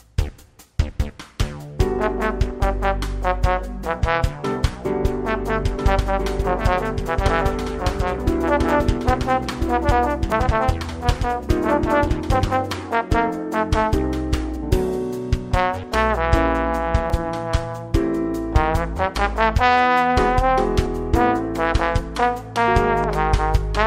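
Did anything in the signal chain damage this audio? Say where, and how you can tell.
Yes. A second capture path, likely a slower duplicate route at the driver or buffer stage, mixed the signal in twice. From 5.65 to 12.81 s a full-band copy trails about one and a half seconds behind, roughly 5 dB quieter, with no room colour, starting and stopping abruptly: a doubled audio track.

The driver's buffering also fell behind, most likely overruns where the hardware overwrote samples before the program collected them. Skips forward with no gap occur at 6.42, 10.32, 14.56, 17.1, 20.86 and 23.04 s. Each is a dropped buffer, about 20 ms lost, nearer 40 ms for the last two.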